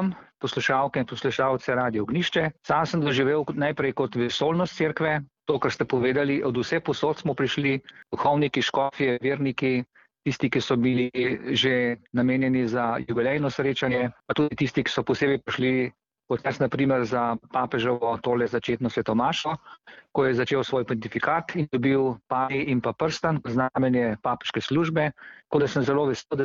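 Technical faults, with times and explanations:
0.70 s and 1.40 to 1.69 s, hard clipping: the signal reached the full-scale ceiling of a stage that could pass nothing larger, with overdrive of about 0 dB, so only the highest peaks were sliced flat. The squared-off tops add upper harmonics that were never in the source. Because the overload is marginal, this sounds like a brief crackle at 0.70 s and a short gritty edge on the loudest peaks through the later span, not a continuous fuzz.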